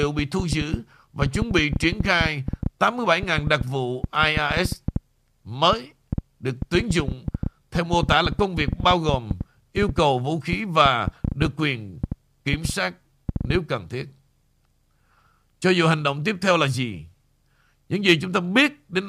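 From 0.03 to 13.56 s, uneven ticking at 6.8 clicks per second, about 10 dB over the speech: a train of clicks, likely interference.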